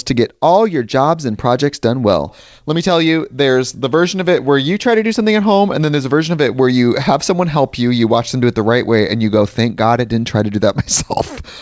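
No technical faults are audible.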